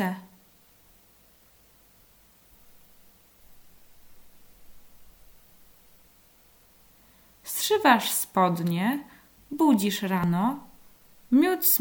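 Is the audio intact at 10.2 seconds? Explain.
No. At 10.24 s there is a skip, likely audio missing between chunks: roughly 40 ms lost at a 4-second chunk boundary, spliced shut with no silence, unlike a silent dropout.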